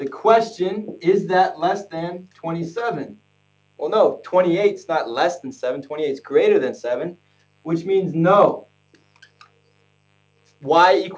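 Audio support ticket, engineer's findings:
Steady raspy mains buzz throughout, faint, well below the signal. 50 Hz harmonics from switching spikes twice per cycle; suspect dimmer, rectifier or unshielded cable. Band tops out at 8 kHz, consistent with a G.722 call path.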